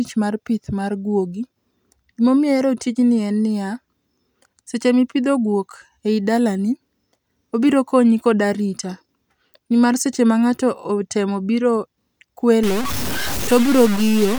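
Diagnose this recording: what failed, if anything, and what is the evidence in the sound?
From 12.63 s to the end at 14.39 s the speech goes gritty. The grain tracks the sound itself, and the quietest parts sputter or drop out. That's low bit depth without dither, likely a sample-format conversion truncating to 4 bits, leaving the error only about 10 dB down.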